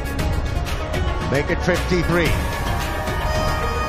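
At 0.55 s the audio jumps forward by roughly 70 ms, and a second jump at 2.08 s skips about 50 ms. These are compressed frames skipped: whole coded frames never reached playback, either because they were missing or because the decoder rejected them as damaged. The jump sizes fit frames of 23.2 ms, about three frames lost the first time and two the second.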